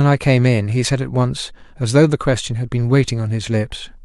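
No technical faults can be heard anywhere in this speech recording. Nothing in it needs a time, a value or a cause noted against it.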